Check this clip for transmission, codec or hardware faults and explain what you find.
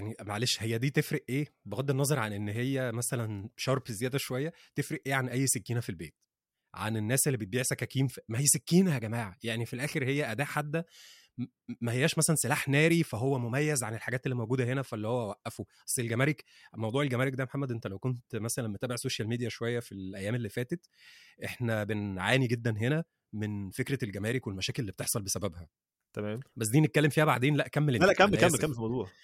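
Nothing wrong can be heard anywhere in this speech.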